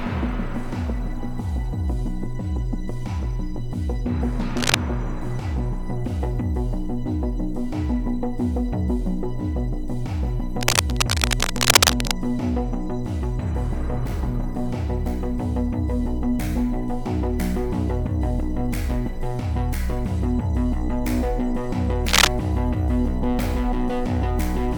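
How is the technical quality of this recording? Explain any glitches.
The recording has three bursts of cable scratch noise. At 4.57 to 4.75 s, 10.61 to 12.17 s and 22.08 to 22.28 s, a ragged scratching rustle sits roughly level with the sound, and is louder still in the last burst. It is likely a worn cable or connector shifting and its contact resistance fluctuating.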